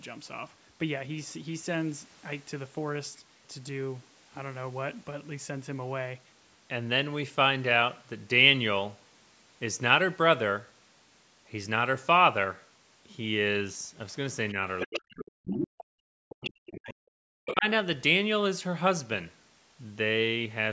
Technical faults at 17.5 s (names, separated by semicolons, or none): speech suppressed in double talk; other side's voice leaking through